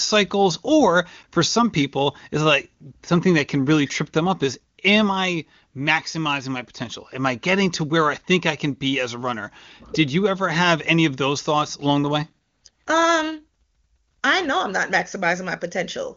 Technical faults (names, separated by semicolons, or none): none